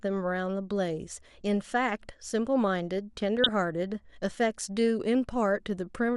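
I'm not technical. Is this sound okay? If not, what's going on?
No, there are two problems. The whole clip sounds dull and plainly gurgly, as if the top end of the speech has been shaved off and what's left has gone grainy. That points to MP2 compression, the older coding used for digital radio, likely squeezed into too little data. It differs from plain muffling because parts of the treble flicker in and out instead of staying steadily faded.

Between about 3.37 and 3.49 s there's a short burst of DAB burbling, a brief patch of noisy blips over the speech. It comes from a weak digital radio signal: a few corrupted pieces of data put short blips of noise into individual slices of the sound. Unlike the constant dullness, it is brief and erratic, which marks it as a reception glitch rather than a coding limit.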